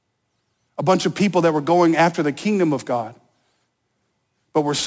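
A speech recording with aliasing from start to finish: high content was folded back around 8 kHz, pointing to a 16 kHz resample with no low-pass first. Sibilants turn gritty and metallic, and a spectrogram shows mirrored energy, roughly 20 dB down, running hard up to the 8 kHz edge.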